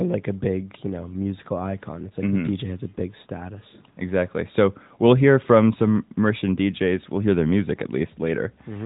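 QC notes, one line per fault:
No faults found; the speech runs through the AMR narrowband mobile codec path as intended, with nothing above 3.8 kHz and only light coding texture, which fits the 12.2 kbps mode.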